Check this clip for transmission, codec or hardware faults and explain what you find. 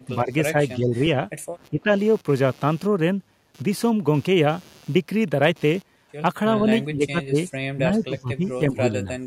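Two faults are present: a low buzz from computer activity noise, and five short dips in the talker's level consistent with speech suppressed in double talk.

Computer activity noise runs for the whole clip. A buzzing pulse sits at roughly 150 pulses per second, around 30 dB below the speech. It comes from the processor, graphics or peripheral load modulating the ground shared with the audio circuitry. It follows the machine's activity rather than the speech, so it persists through pauses.

The level dips occur at 0.07–0.31 s, 0.77–1.15 s, 1.7–1.92 s, 6.94–7.37 s and 7.75–9.08 s. The talker's level sags, shallow at first (a few dB), deepening to about 20 dB in the 6.94 s event. The last event is the longest, with about a second affected. The likely cause is an echo canceller that could not separate the near talker from loudspeaker echo while both sides spoke at once, and so attenuated the near talker too.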